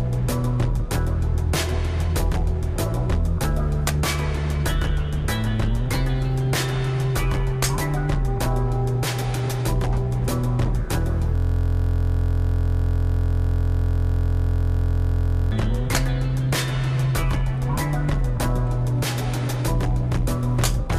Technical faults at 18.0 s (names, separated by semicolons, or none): none